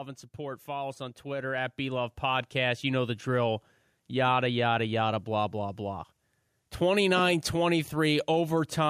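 A speech recording with automatic gain rising from 0.36 s to 3.29 s: the gain control judged the input too quiet and ramped up by about 11 dB over nearly three seconds, so the voice and background noise swell together.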